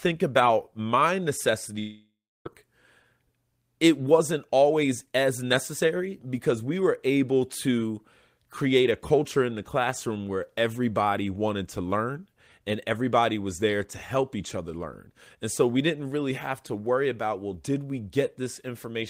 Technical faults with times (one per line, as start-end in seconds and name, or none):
1.79-2.47 long network dropout